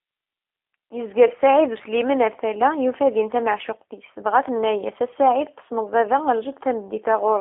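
Throughout, the speech carries G.729 codec damage: an 8 kbit/s model rebuilds it, leaving rough, synthetic texture and nothing above 3.5 kHz, unlike plain band-limiting.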